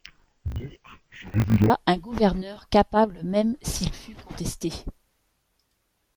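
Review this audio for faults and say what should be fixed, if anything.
From 0.0 to 1.71 s the speech shows interleaved audio read as planar. Each 20 ms block of alternating left and right samples was split into halves and each half played at half speed, dropping the content an octave. Because the blocks are short, it sounds dull and robotic with a 50 Hz buzz. A spectrogram shows compressed harmonics and regular vertical striations every 20 ms. The fix is to match the channel-layout flag to the actual sample order at every decode and resample stage.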